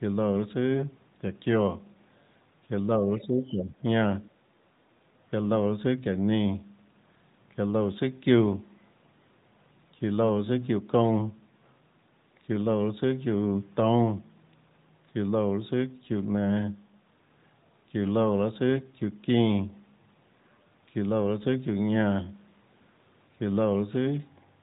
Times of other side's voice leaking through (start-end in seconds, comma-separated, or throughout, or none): 3.43-3.54